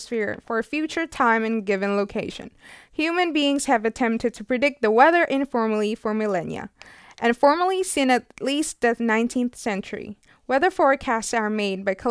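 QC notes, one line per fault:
No faults were heard anywhere in the speech on listening.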